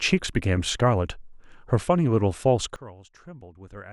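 At 2.76 s the speech drops abruptly by about 20 dB and stays at that lower level to the end: a sudden gain jump. The level change lands between one sample and the next with no ramp, most likely from a gain setting or bit shift applied instantly. Voice and background noise fall together, so the quieter section sounds like a sudden step away rather than a fade. On a waveform the envelope shrinks in a single vertical step, and a spectrogram shows every frequency darkening at once along a sharp vertical edge.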